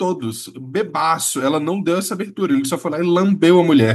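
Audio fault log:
0.57 s to end: automatic gain rising. The gain control judged the input too quiet and lifted level by about 15 dB, swelling speech and background together.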